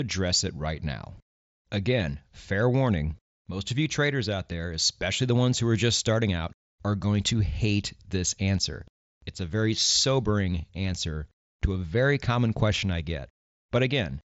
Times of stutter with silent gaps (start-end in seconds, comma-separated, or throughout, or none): none